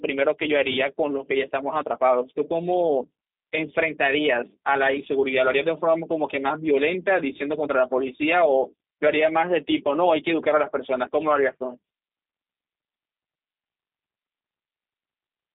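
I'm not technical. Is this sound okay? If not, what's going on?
No. Throughout, the speech went through the G.729 codec, a low-data phone-call compressor that rebuilds it roughly, so it sounds narrow, muffled, slightly rough and synthetic.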